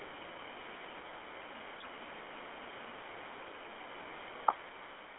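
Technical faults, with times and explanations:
Throughout, GSM full-rate codec: band limited to roughly 300 Hz to 3.4 kHz, with a plainly buzzy, gravelly roughness from pulse-driven vocal-tract modelling, which fits a 13 kbps GSM stream.
1.80 to 1.87 s, GSM bit errors: a brief squawk and gargle. Corrupted filter, pitch and gain values distort several frames, pointing to about a 1.6 percent bit error rate.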